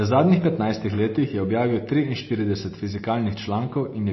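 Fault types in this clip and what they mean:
MP3 compression: Speech is plainly watery and swirly, with nothing above 5.8 kHz, likely from low-bitrate MP3 around 24 kbps; the shifting artefacts separate it from low-pass filtering.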